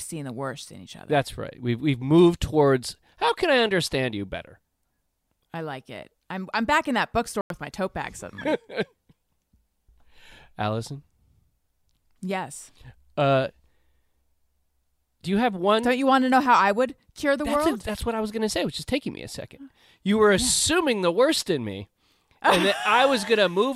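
A speech recording with two kinds of damage. At 7.41 to 7.50 s, between "I'm back in that" and "my tote bag suddenly", a corrupt frame muted leaves an abrupt 96 ms hole of clean silence, roughly two frame lengths, with no time lost. A corrupt FLAC frame instead produces sound rather than silence: brief decoding errors at 16.46 s, after "you want to know", peaking about -25 dBFS, and at 18.79 s, after "going to say which", about -32 dBFS, each clean again at the next intact frame.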